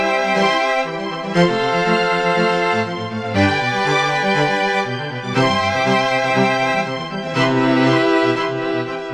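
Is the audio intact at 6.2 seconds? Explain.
Yes, at 6.2 seconds the audio is intact, with no dropout, click, distortion or other fault at that moment.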